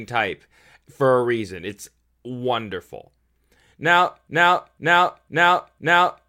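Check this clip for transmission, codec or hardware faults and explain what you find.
A broken-record loop runs from 4.28 s to the end of this speech clip. A half-second fragment, about 503 ms long, repeats exactly and back to back four times with no variation, so the same short stretch of sound plays over and over until the audio stops. The likely cause is a stall in the player, encoder or stream, which kept resending the last fragment it held, so whatever should have followed 4.28 s never arrives.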